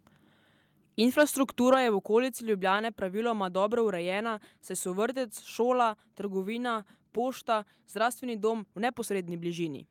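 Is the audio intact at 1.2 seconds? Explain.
No. From 1.19 to 1.23 s, just before "je v okolici", there is microphone overload. The input level was likely set too hot, so the loudest peaks drove the converter about 4 dB past its maximum, and around 7 percent of the samples in that span were flattened at the converter's limit. With the waveform tops sheared off, that brief burst takes on a harsh, crackly, distorted edge instead of a clean transient.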